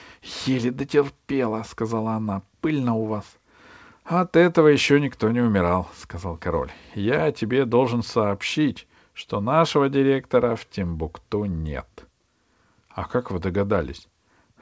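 A speech recording in which nothing stood out on listening, its content ending at 8 kHz in the way a wideband call path such as G.722 would deliver it.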